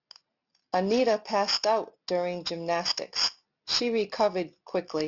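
Aliasing runs through the whole speech clip. The audio points to a drop to a rate around 12 kHz without a proper anti-alias filter, so content above the 6 kHz fold point is reflected back below it as unrelated frequencies. The folded energy sits nearly as loud as the real signal, giving sibilants a gritty, metallic edge, and the spectrum stays dense right up to 6 kHz instead of rolling off.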